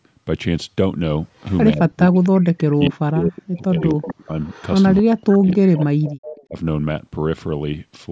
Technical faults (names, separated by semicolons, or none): echo leak; speech suppressed in double talk